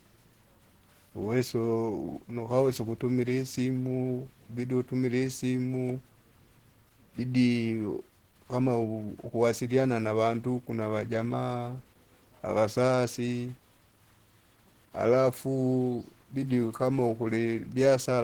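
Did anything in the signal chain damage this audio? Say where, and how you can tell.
Yes. The damage sits at the codec stage and runs through the whole clip. The speech sounds hoarse, grainy and muffled, and the roughness is plainly audible. There is little swirling and few spectral holes, and content still reaches about 20 kHz. That points to a low-rate speech mode that fills bands rather than dropping them. The likely cause is Opus compression in its hybrid mode, at a rate consistent with roughly 16 kbps.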